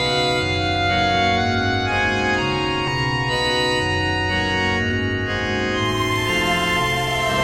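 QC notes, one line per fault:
2.87–2.89 s, skip ahead: the music jumps forward here, losing roughly 0.7 s of material, and the two sides are butted together with no silence filling the join. The playback clock shifts earlier by about that same amount. This is what happens when a chunk of audio gets thrown away, in transit or by an overflowing jitter buffer, while later audio is already queued, so the phrase lurches on abruptly instead of dropping out.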